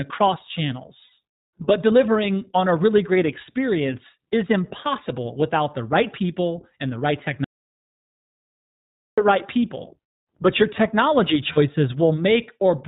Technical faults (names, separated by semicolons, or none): iLBC codec; lost iLBC frames; audio dropout to silence